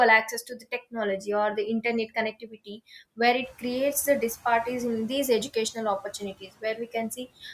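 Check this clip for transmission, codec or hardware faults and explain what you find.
The speech shows one recurring fault, speech cut by the noise suppressor, in three places: 0.32 to 0.96 s, just before "or the internet"; 2.32 to 2.8 s, between "or the internet" and "where it creates the"; and 6.4 to 6.9 s, after "disparities in these educational". The suppressor mistook quiet speech for noise and pulled it down with the background, by about 16, 15 and 12 dB. Roughly a third of a second is affected in each of the first two spans and only about a tenth in the last. Endings and soft sounds come out swallowed and faint rather than cut to silence or clicking, which separates this from a dropout or packet loss. The room noise, which rises by about 13 dB near 3.5 s and sits about 21 dB below the speech, belongs to the recording itself.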